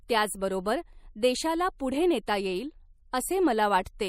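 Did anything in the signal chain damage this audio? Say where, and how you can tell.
Yes. Throughout the speech weak detail swirls watery, pointing to MP3 compression starved of bits at the codec stage, likely near 64 kbps.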